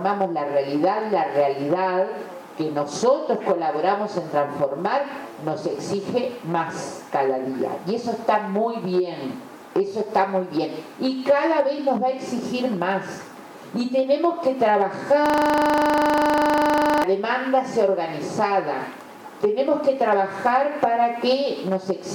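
At 15.26 s the system hangs while the audio hardware keeps cycling through its ring buffer, a system hang loop. One 40 ms slice repeats 44 times until 17.04 s, so the sound collapses into a hard, rattling stutter at 25 Hz.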